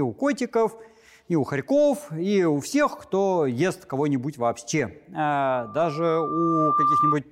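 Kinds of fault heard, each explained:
Loudspeaker feedback squeal: a microphone hearing its own loudspeaker forms a loop that runs away at one frequency, here 1.2 kHz, from 5.52 to 7.16 s, ending louder than the sound. Unlike a steady whistle, it swells by itself over roughly a second and a half.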